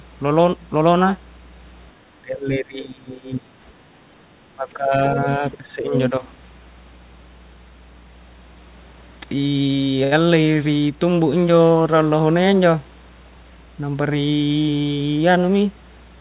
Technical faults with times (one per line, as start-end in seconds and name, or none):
0.00-16.20 mains hum
2.22-3.58 speech suppressed in double talk
4.55-5.93 speech suppressed in double talk
5.49-5.57 other side's voice leaking through
5.98-6.08 other side's voice leaking through
10.04-10.22 short stall from a late packet